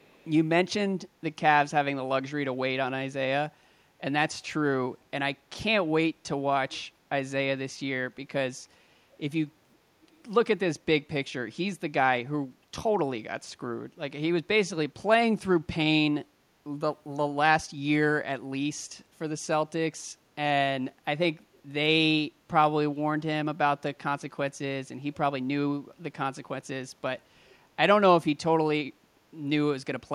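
Right at the start, from 0 to 0.28 s, there's a faint echo leak, a delayed copy of the speech about half a second late (524 ms), sitting way down under the voice. It pops up again, somewhat louder, from 6.71 to 6.82 s, and once more, faint, from 27.46 to 27.52 s. Each is just a short scrap. The likely cause is a far end on loudspeaker whose echo canceller let some of its mic pickup slip back down the line.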